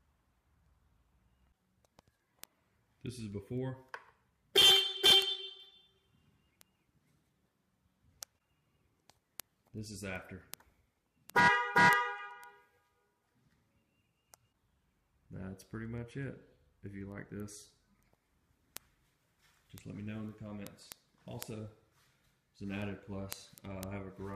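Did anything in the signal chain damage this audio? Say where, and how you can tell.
Yes. Word clock ticks from an unlocked digital link run from 0.16 to 24.34 s, about every 0.15 s, a clock mismatch around 150 ppm. Each slip drops or repeats one sample, showing as thin vertical broadband lines on a spectrogram and isolated spikes in the waveform.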